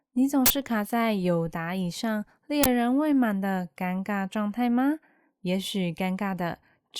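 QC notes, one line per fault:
0.46–0.50 s, uninitialised buffer: a block of about 42 ms went to the output before any audio had been written into it, so stale memory contents played back as samples. The result is a sudden, loud burst of harsh digital noise cutting across the speech, a length which fits a 2048-sample block.
2.64–2.66 s, uninitialised buffer: the same failure recurs on a shorter block of about 21 ms, consistent with 1024 samples, giving a briefer noise burst.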